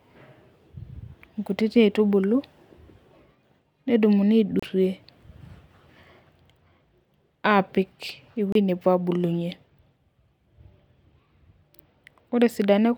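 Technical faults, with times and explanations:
4.60 to 4.63 s and 8.52 to 8.55 s, Bluetooth stall: the speech drops out to dead silence for about 30 ms each time, the second just before "nepuo aabulunye", then carries on. That's likely the headphone buffer running dry while interference held packets up.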